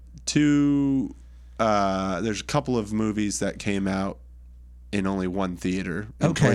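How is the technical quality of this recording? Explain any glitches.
The speech carries a steady mains hum for the whole recording. A ground loop or nearby transformer couples the 60 Hz power line into the signal, leaving a constant low tone roughly 20 dB below the speech. Its fixed pitch distinguishes it from rumble, which is broadband and irregular.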